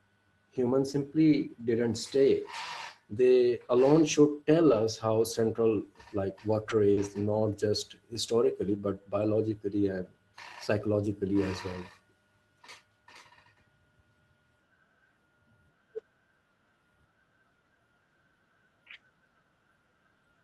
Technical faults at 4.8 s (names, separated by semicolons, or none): lost packet rebuilt from error correction